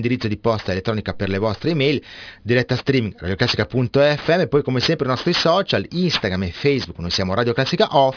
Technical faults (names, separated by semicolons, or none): aliasing